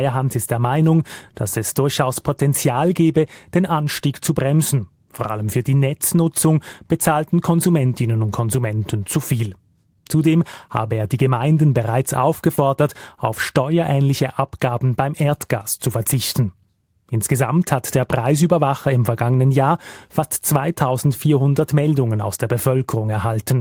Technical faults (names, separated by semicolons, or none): short concealed packet loss